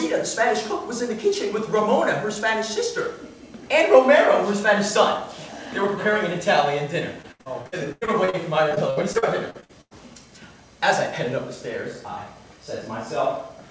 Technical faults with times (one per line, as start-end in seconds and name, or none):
7.22-9.93 repeated packet loss (robotic sound)